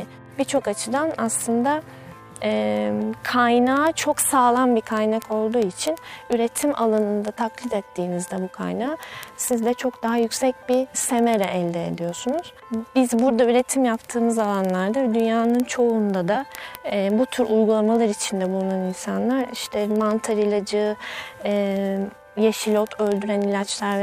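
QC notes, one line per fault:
0.11–24.02 s, word clock ticks: sharp, uneven ticks about twenty times a second. The unlocked receiving clock drifts roughly 500 ppm, slipping one sample each time.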